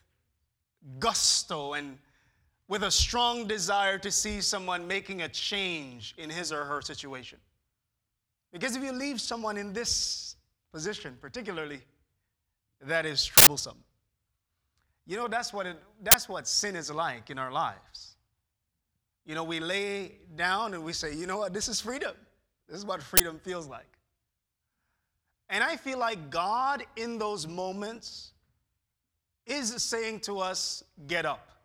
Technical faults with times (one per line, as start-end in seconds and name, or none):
13.37-13.47 uninitialised buffer
16.11-16.14 uninitialised buffer
23.17-23.20 uninitialised buffer